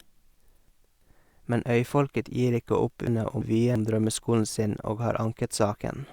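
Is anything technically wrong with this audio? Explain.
Yes. Chunks out of order occurs twice in this speech, at 0.34 to 1.02 s and at 3.07 to 3.76 s. Each time, one block of audio about 0.34 s long was delivered or written one chunk late, so it plays after the block that should follow it. No audio is lost, but the sequence is swapped and three hard joins appear. The result is a brief jumbled stretch of speech.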